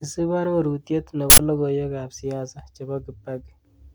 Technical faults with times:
1.30-1.39 uninitialised buffer

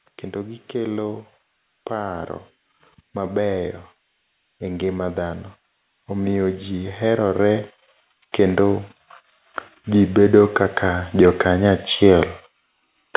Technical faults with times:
6.06-7.67 automatic gain rising
9.72-12.30 automatic gain rising

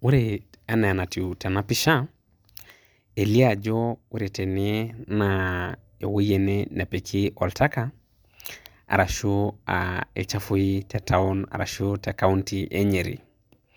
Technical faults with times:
none

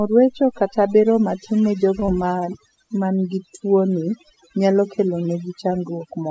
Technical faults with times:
0.00-6.30 overdone noise removal
2.00-2.04 short stall from a late packet
2.06-2.10 short concealed packet loss

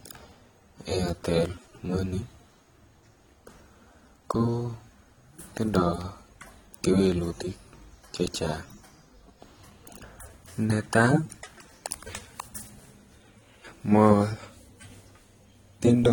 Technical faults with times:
0.00-16.13 AAC compression

